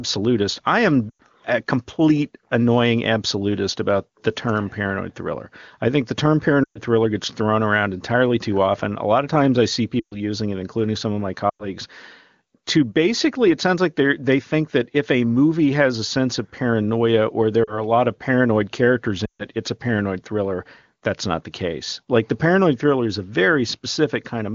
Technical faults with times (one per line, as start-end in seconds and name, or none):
1.10-1.21 lost AMR speech frames
6.64-6.78 lost AMR speech frames
9.99-10.16 lost AMR speech frames
11.50-11.67 lost AMR speech frames
17.64-17.84 lost AMR speech frames
19.25-19.44 lost AMR speech frames